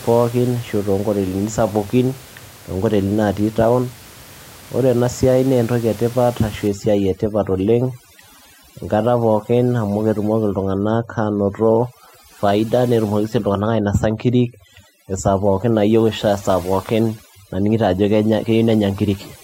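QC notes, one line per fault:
6.68–19.43 s, overdone noise removal: noise reduction set too strong cuts frequency bands whenever they sit near its noise estimate. Room noise, about 22 dB below the speech earlier, drops and breaks up into twinkling specks, and quiet speech detail drops out.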